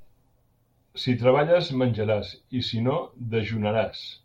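No technical faults can be heard in the recording.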